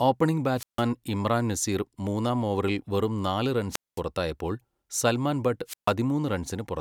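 A short rise of hiss, then a near-silent hole, then the speech returning: this happens at 0.55 to 0.84 s with about 154 ms muted, just before "ഇമ്രാൻ നസീർ മൂന്നാം ഓവറിൽ"; at 3.70 to 4.01 s, muting about 217 ms right after "മൂന്നാം ഓവറിൽ വെറും നാല്"; and at 5.66 to 5.93 s, muting about 140 ms. Each is a wireless microphone squelch dropout. The FM radio signal weakened until the receiver's squelch gated the output off.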